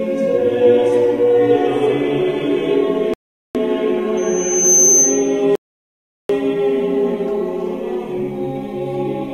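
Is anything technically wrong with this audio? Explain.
Yes, the music has two kinds of fault. Twice, a rebuffering stall occurs: the player ran out of downloaded audio and halted until more arrived. At 3.14 s the music drops to silence for about 0.41 s, and at 5.55 s for about 0.74 s. Each time it resumes exactly where it stopped, so nothing is skipped but time is added.

From 4.17 s to 5.45 s there is loudspeaker feedback squeal: a microphone was picking up the loudspeaker it fed, and at 6.2 kHz the loop gain exceeded one. That tone swells over roughly half a second into a squeal, ending up around 5 dB above the music.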